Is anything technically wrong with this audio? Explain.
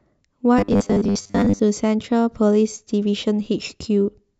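Yes. From 0.59 to 1.60 s the speech turns into robotic sound from repeated short buffers: a rigid, metallic buzz at a fixed 100 Hz that still loosely tracks the words. The likely cause is audio arriving too slowly, so a chunk of about 10 ms is looped while most of the real signal is skipped. Unlike a stutter or dropout, there are no audible gaps, just a steady mechanical pitch.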